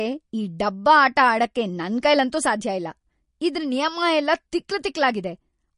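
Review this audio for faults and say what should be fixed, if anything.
MP3 compression damage is plainly audible through the whole clip. Nothing is heard above 10.6 kHz, where the treble is cut off. Weak frequency detail flickers from frame to frame, so the speech sounds watery and swirly. This fits a low bitrate near 40 kbps, the likely cause. Encode at a higher bitrate, or keep a lossless master and compress only once at the end.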